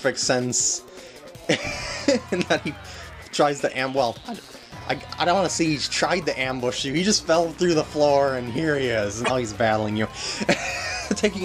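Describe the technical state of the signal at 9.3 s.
From 9.24 to 9.31 s the audio jumps ahead and garbles. The likely cause is a broken MP3 bit reservoir: frames after a cut read another frame's bytes.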